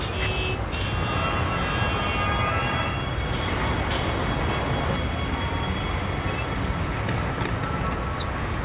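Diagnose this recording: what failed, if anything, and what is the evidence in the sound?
Nothing failed; no faults heard.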